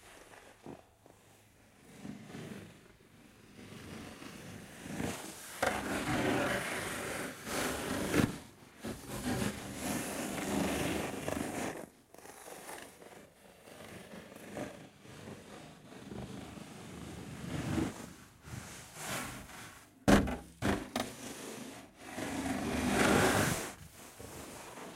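Throughout the sound, a channel delay (doubling) is heard: one channel arrives 40 ms late before the two are summed to mono, so every event repeats as a distinct slap at equal level. Unlike room reverb, the echo is single, undecaying and evenly spaced.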